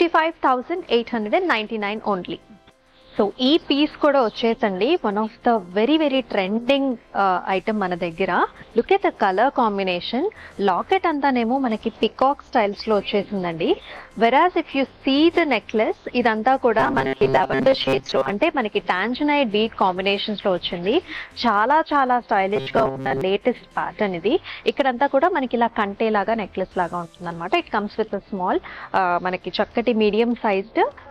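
Robotic sound from repeated short buffers at 16.79–18.31 s and 22.56–23.21 s: a rigid 134 Hz buzz, likely from 7.5 ms repeats replacing most audio, seen as evenly spaced harmonic stripes and identical repeating waveform cycles.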